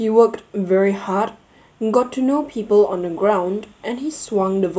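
A short recording of speech with no technical faults to report. Nothing in the signal calls for a time or a cause.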